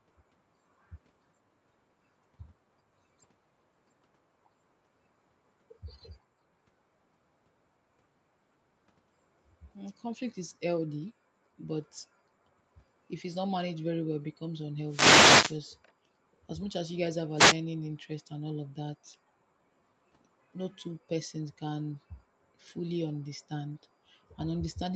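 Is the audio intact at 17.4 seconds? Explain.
No. A wireless microphone noise hit runs from 17.35 to 17.56 s. Reflected radio paths cancel the analogue FM signal there. The receiver's own noise swells into the gap, heard as a brief burst of static and swish over the speech.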